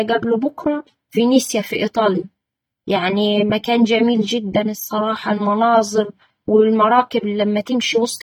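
AAC compression damage runs through the whole speech clip from start to finish. The artefacts are plainly audible, and their character fits the AAC-LC codec at a low rate of around 32 kbps, which is likely the cause. The encoder splits the sound into short frames of frequency lines and quantises them coarsely against a model of hearing, discarding detail it judges masked. Energy still reaches up to about 19.3 kHz, but the coarse coding leaves the speech sounding smeared and processed.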